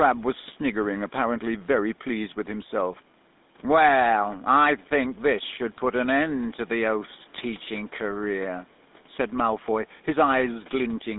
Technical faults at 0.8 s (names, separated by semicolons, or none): GSM full-rate codec